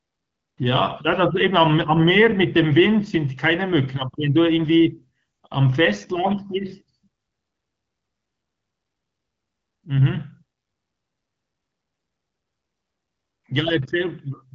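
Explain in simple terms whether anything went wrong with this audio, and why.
Nothing went wrong here: the speech comes through an AMR wideband (HD Voice) phone connection working just as it should, so the faint codec texture and the missing sparkle above about 7 kHz are simply how that kind of call sounds.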